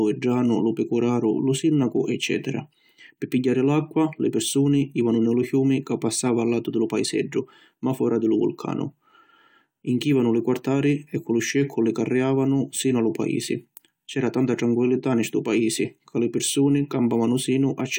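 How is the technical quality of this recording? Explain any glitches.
The recording has no technical glitches to explain. No fault can be heard at any point in the speech.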